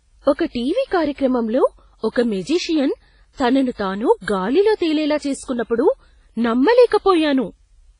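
Throughout, the audio has most likely passed through WMA compression at a low bitrate, and the heavy damage fits something near 24 kbps. Coarsely quantised long transform blocks leave speech ringing and washy, with hiss that swells and fades alongside the signal and nothing above about 10.3 kHz.

From 2.12 to 2.16 s, a pre-echo appears. A sharp attack landed late in a transform block, so quantisation noise sized for the loud part spread back into the quiet moment before it. The result is a short hiss about 40 ms long ahead of the onset, which sounds softened and smeared.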